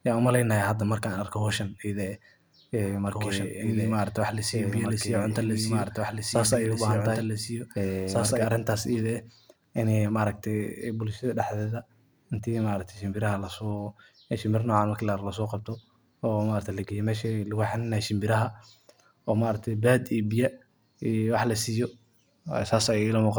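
From 3.07 s to 8.45 s the speech is heard twice: a doubled audio track, with a second full-band copy trailing the original by roughly two seconds and sitting a few decibels below it. The late copy carries no decay or room colouring, and it cuts in and out abruptly at both ends. The likely cause is the signal being captured a second time through a slower path, or an edit leaving two copies out of alignment.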